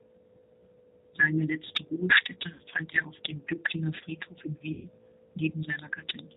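Across the whole clip the speech is band-limited and slightly rough and synthetic, with nothing audible above 4 kHz. This is G.729 codec coding, and the plainly audible damage points to an 8 kbit/s G.729A stream. The decoder rebuilds each 10 ms frame from a vocal tract filter, a pitch predictor and a few pulses rather than carrying the actual waveform.

At 2.53 to 2.61 s, just before "fand er auf dem", the sound smears into a brief buzzy tone or coloured noise that fades. At 4.73 to 4.89 s a longer stretch turns into the same kind of fading concealment sound. Both are VoIP packet loss concealed by the speech codec. About 60 ms and then 120 ms of audio went missing, and the decoder filled each gap by extending its last pitch and filter at falling gain. The speech stays weak or distorted briefly afterward while the decoder recovers.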